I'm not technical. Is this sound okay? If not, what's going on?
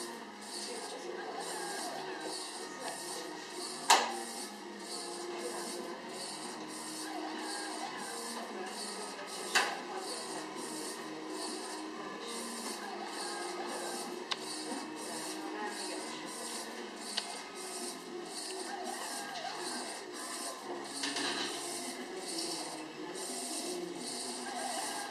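No. From about 21.16 s to the end, you hear a doubled audio track. A second copy of the same sound, about as loud, trails roughly 0.15 seconds behind and starts abruptly. It's likely being captured twice through a slower path.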